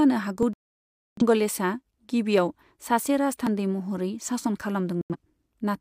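At 0.43 s the speech jumps, and at 3.47 s, just before "महरै सासन", the same skip happens again. Each is a dropped buffer (overrun), likely caused by the program not collecting its samples before the hardware overwrote them. Roughly ten milliseconds vanish each time and the two sides butt together, so the sound skips forward instead of pausing.

From 0.53 to 1.22 s the audio goes silent for 640 ms, which points to around fifteen lost frames. This is a digital broadcast dropout: the receiver lost the signal or rejected corrupted frames and muted until clean ones arrived. A shorter hole of about 85 ms follows at 5.01 to 5.16 s, right after "महरै सासन". Unlike the skips, these dropouts leave audible silence, and the speech resumes later rather than jumping ahead.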